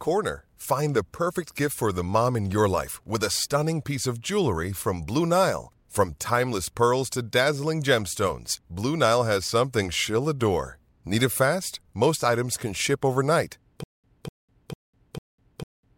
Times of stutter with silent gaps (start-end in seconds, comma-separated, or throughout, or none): 13.84-15.97